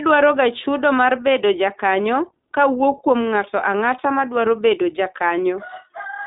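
From start to finish the speech carries the sound of the iLBC codec. The band is held to roughly 200 Hz to 3.7 kHz, with nothing above 3.8 kHz, so sibilants and breath lose their top and the voice sounds boxed in. Each 20 ms frame's excitation is coded on its own, and at the rate this suggests, around 15.2 kbps, the damage is plainly audible as a rough, slightly synthetic buzz.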